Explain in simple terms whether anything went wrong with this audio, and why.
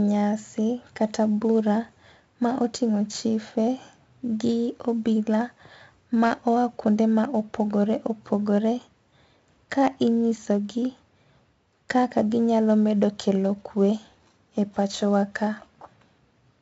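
Yes, the whole clip has been through 4-bit ADPCM compression, and it's heavy. Each sample is stored as a tiny guess-and-correct step, so a gritty hiss rides on the louder speech and sharp starts get roughed up. Nothing survives above 7.7 kHz, which dulls the sound.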